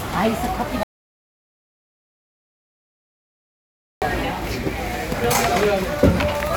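At 0.83 s the audio drops out to silence and stays there until 4.02 s, about 3.19 s in all. This is an audio dropout to silence: the gap holds no room tone or noise floor, only silence, so the sound stops abruptly and resumes just as abruptly mid-flow. The likely cause is the input signal being lost, through a disconnected device, failed link or mute, while recording continued. Whatever sounded during that span is unrecoverable.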